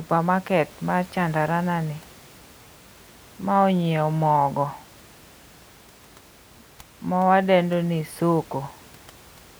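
No technical faults can be heard anywhere in this speech recording. A low background of room noise sits about 26 dB below the speech, picked up by the microphone along with it.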